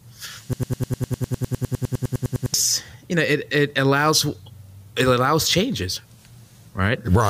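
A broken-record loop runs from 0.53 to 2.54 s: a 0.1 s fragment of speech repeats 20 times, likely because playback stalled, and the speech it replaced is lost.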